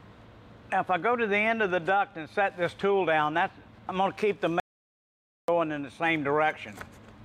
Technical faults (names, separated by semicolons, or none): audio dropout to silence